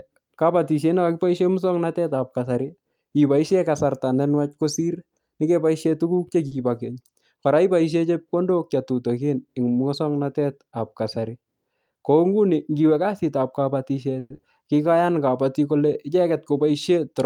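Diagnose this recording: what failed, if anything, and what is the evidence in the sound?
The failure is in the network path and the receiver's jitter buffer. At 6.47 to 6.53 s there is a short stall from a late packet. The sound is held too long. About 40 ms of stretched audio covers the wait, and nothing is lost. Afterwards the speech runs 40 ms later than before.

Jitter buffer speed-up happens twice. From 11.18 to 11.56 s the speech runs at 111% with unchanged pitch. From 16.3 to 17.14 s it runs at 105%. Each time the buffer cuts about 50 ms of pitch periods to shed surplus delay, so the words sound hurried.

From 14.19 to 14.4 s the sound turns into a fading fill lasting 190 ms. About 10 ms of silence follows. The speech then resumes 80 ms further on. This is likely a long network dropout: packets stopped arriving, and the receiver extrapolated the last sound until they returned.

Jitter buffer slow-down follows from 14.83 to 15.19 s. 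The speech drags at 85% speed with the same pitch. The buffer repeats pitch periods, adding 61 ms, to rebuild its reserve. The sounds are drawn out.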